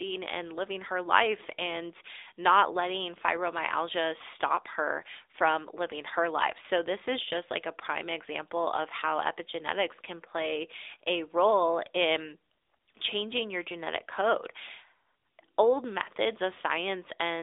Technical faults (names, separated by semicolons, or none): AMR narrowband mobile codec